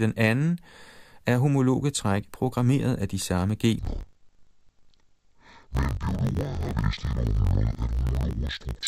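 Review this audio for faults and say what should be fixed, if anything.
From 3.79 s to the end at 8.88 s the speech turns dull and robotic, with a buzz at about 50 Hz and the pitch pulled down an octave. That's interleaved audio read as planar. Each 20 ms block holds alternating left and right samples, but the reader takes the first half as left and the second as right. Both halves then play at half speed, which gives the octave drop, and the seam at every block boundary produces the 50 Hz buzz. To prevent it, make sure the sample layout flag (interleaved or planar) is carried through and checked wherever buffers are handed between stages.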